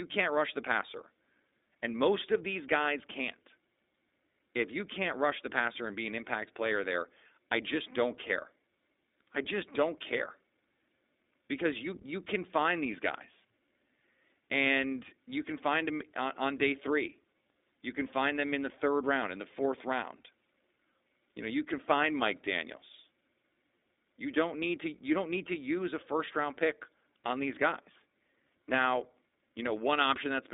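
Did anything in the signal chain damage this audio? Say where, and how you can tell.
Yes, at the codec: iLBC coding throughout limits the band to 300 Hz to 3.7 kHz, and each 20 ms frame coded independently makes the speech rough and synthetic, consistent with 15.2 kbps.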